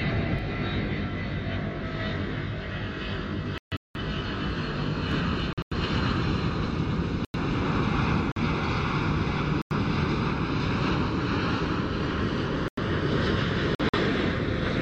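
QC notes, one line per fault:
0.39 to 5.11 s, channel delay (comb filtering): the sound turns rough and slightly doubled. One channel runs roughly 20 ms behind the other, and when the two fold to mono, everything they share cancels at evenly spaced frequencies starting around 30 Hz. This creates a fixed comb of notches. Unlike a dropout, nothing goes missing in time: the tone colour stays steadily wrong until 5.11 s, when the sound opens back up.
3.58 to 3.99 s, 5.53 to 5.77 s, 7.25 to 7.39 s, 8.32 to 8.42 s, 9.62 to 9.76 s, 12.68 to 12.83 s, 13.75 to 13.98 s, corrupt frame muted: seven holes of pure silence, from about 0.1 s to 0.42 s long, that cut in abruptly with no fade. Damaged compressed frames were rejected by the decoder and replaced with silence. The longest gap fits several consecutive frames lost at once. Timing is kept, so the sound resumes exactly where it should, with nothing skipped or stretched as in a buffer underrun.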